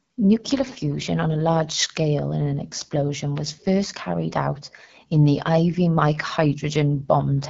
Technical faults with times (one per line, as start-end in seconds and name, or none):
0.00-7.49 AMR wideband (HD Voice) codec